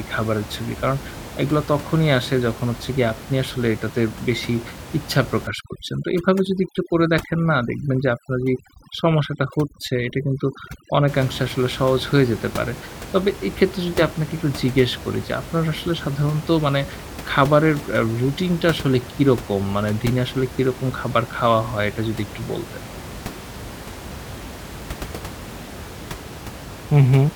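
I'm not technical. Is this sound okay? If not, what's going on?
No. From about 5.47 to 11.08 seconds, a noise-cleaning tool was set far too strong, which is overdone noise removal. It treats anything close to the background hiss as unwanted, so it shuts off slices of the sound, including the softer parts of the speech. During that stretch the background drops and breaks up into twinkling specks. Outside that stretch you can hear ordinary room noise beneath the speech.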